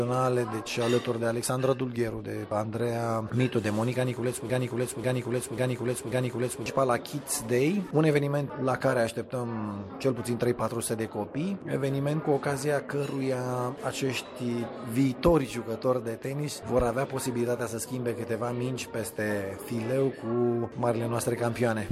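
From 4.50 s to 6.66 s the clip falls into a broken-record loop: one 0.54 s fragment repeats exactly, back to back, four times. The likely cause is a stalled player, encoder or stream resending its last buffered fragment, and the audio due in that span is lost.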